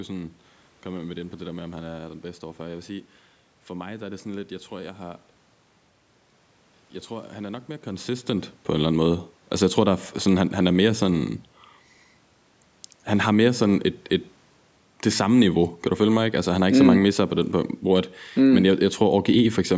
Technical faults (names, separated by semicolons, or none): none